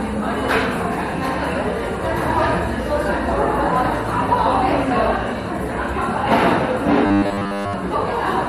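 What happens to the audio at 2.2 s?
DAB burbling runs from 2.21 to 2.54 s: bit errors, at a rate of roughly a tenth of a percent, slip past error correction into the MP2 data across 16 frames, so wrong samples put short blips of noise into single sub-bands, giving a burbling over the sound.

Underneath, the audio is dull and granular throughout, with upper bands flickering in and out, likely from MP2 compression at a low bitrate, consistent with about 80 kbps, where too few bits force coarse quantisation and switched-off high sub-bands.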